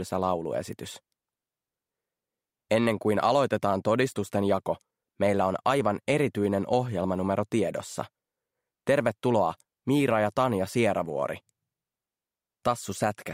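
At 0.73 s a single sharp snap sits on top of the sound: an electrical switching spike, lasting barely a millisecond and peaking at a moderate level, around -25 dBFS. It is likely a nearby switch or motor arcing and inducing a brief burst into the audio line. Unlike a dropout or a buffer glitch, nothing underneath is interrupted or repeated. The sound carries straight through, with the crisp transient simply added over it.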